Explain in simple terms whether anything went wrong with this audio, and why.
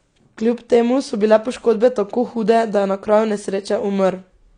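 Something's off for the whole clip. The speech sounds dull, with nothing above about 9.8 kHz. That's likely low-bitrate audio saved at a high bitrate: a heavily squeezed file was later resaved as a large one, which can't restore the detail already lost.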